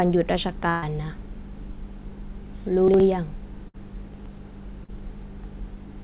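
At 0.70 s there is a burst of packet loss lasting to 0.84 s. About 120 ms of the speech never arrived in time. The receiver kept the last sound going for roughly that span and let it fade. A voiced sound turns into a held buzz, an unvoiced one into a dying hiss. The speech then picks up further on, and the missing part never returns.

From 2.88 to 3.00 s, chunks play out of order. A 60 ms chunk arrived one chunk late and plays after the chunk that should follow it. Nothing is lost. The order is wrong, though, and there are three hard joins. The moment sounds briefly garbled.

A second burst of packet loss runs from 3.68 to 3.76 s. About 60 ms is missing here. The filled stretch is shorter, so the held buzz or fading hiss is briefer. The speech still jumps ahead when it resumes.

The same reordering fault returns from 4.14 to 4.26 s. Again a 60 ms chunk lands one chunk late. The moment sounds jumbled.

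At 4.84 to 4.90 s comes a short concealed packet loss. Roughly 40 ms went missing. The receiver bridged it by continuing the last sound and blending back in. It is heard as a quick smear or wobble. A brief consonant could vanish. Throughout, the call path carries nothing above 4 kHz, which fits a narrowband G.711-style codec.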